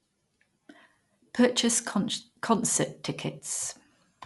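Listening to the speech here, nothing stood out as a technical problem at any point.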